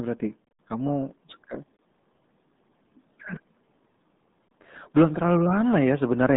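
Throughout, the speech sounds muffled and gargly, with nothing above about 3.8 kHz and a narrow band of roughly 150 Hz to 3.7 kHz. This is the RealAudio 14.4 codec, whose heavy damage fits the 8 kbit/s dial-up speech coding it uses.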